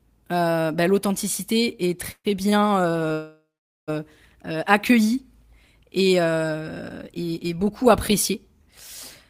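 At 2.11–2.27 s, just after "euh bah l'authenticité est", a call audio freeze likely came from delayed packets draining the jitter buffer. The last sound is held as a fading buzz or hiss for about 130 ms, with roughly 70 ms of silence, before the speech resumes where it stopped. On a spectrogram, the harmonics smear flat and then go blank.

At 2.50–2.54 s, a short stall from a late packet stretches a sound by about 24 ms, heard as a slight buzz or dip. On a waveform, it shows as a brief repeated, flattened cycle pattern.

At 3.12–3.90 s, a second freeze lasts about 750 ms. It starts as a decaying buzz or hiss and ends in about 450 ms of near-silence, which appears as an empty band on the spectrogram.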